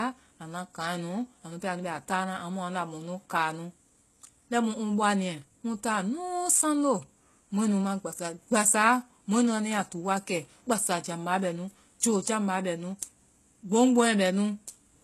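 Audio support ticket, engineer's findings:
Speech throughout, plainly degraded: s sounds gritty and lispy, with a metallic, synthetic top end; treble present but not tracking the lower harmonics; nothing above about 12.3 kHz. Likely HE-AAC compression at a very low bitrate, consistent with roughly 16 kbps. Spectral band replication copies lower bands upward under a coarse envelope, so the rebuilt highs are misaligned with the real spectrum.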